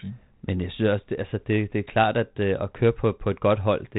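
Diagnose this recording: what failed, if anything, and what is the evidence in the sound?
Nothing failed in this recording.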